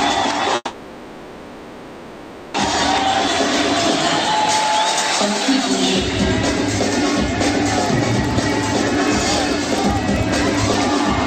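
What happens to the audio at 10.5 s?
At 10.5 s you're in the middle of a run of periodic USB or driver dropouts that lasts from about 7.86 s to 10.74 s. Every 64 ms, something in the background stalls the audio path and roughly a millisecond of sound gets replaced with silence. That makes a steady ticking, about 15 or 16 clicks a second, riding on the sound wherever there's signal. Over the span that adds up to around fifty little gaps.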